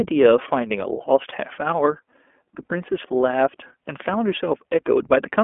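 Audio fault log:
Throughout: iLBC codec. This speech is confined to a telephone band of roughly 250 Hz to 3.4 kHz, with nothing above 4 kHz. Each 20 ms frame is coded on its own at a rate that fits 15.2 kbps. The result sounds plainly rough and slightly synthetic.
1.30 to 1.33 s: lost iLBC frames. About 20 ms of audio, which fits one lost frame, is replaced by a repeated pitch cycle mixed with noise. It sounds like a brief buzzy held vowel. Because frames stand alone, the voice recovers immediately afterwards.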